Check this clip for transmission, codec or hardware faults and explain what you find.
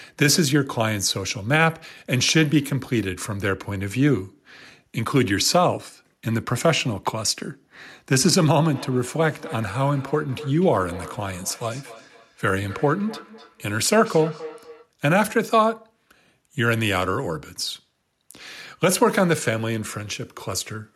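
One fault stands out in this speech clip. From 8.69 to 14.93 s, thin ringing repeats trail the speech roughly every third of a second, about 18 dB down: feedback echo between two devices.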